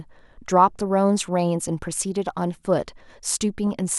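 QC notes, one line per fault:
3.67–3.74 s, DAB burbling: for about 70 ms near the end of the speech, a brief burble rides over the sound. Marginal reception let bit errors slip past the error correction into the MP2 audio data, so corrupted samples put short noise blips in single sub-bands. The span fits roughly four frames, and the sparse damage suggests a bit error rate of around a fifth of a percent.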